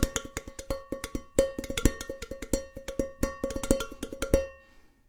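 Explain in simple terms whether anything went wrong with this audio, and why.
Nothing went wrong that can be heard here; listening to these sounds, no glitch, dropout or distortion stood out at any point.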